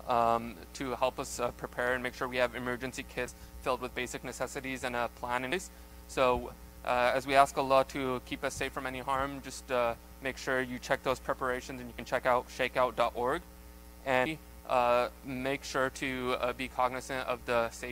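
Three short bursts of damaged data in a compressed stream interrupt the sound: at 3.25 to 3.28 s, at 5.52 s, and at 11.95 to 11.99 s. Each is a brief chirp or blip where corrupted bytes made the decoder misread frames and lose sync before locking back on. On a spectrogram each appears as a thin vertical smear of broadband energy; the waveform shows an abrupt discontinuity with a jagged spike or a tiny gap.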